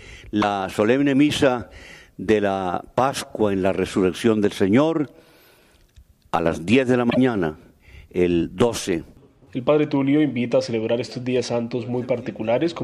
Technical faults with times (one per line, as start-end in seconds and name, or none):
0.38-0.43 damaged data in a compressed stream
7.07-7.18 damaged data in a compressed stream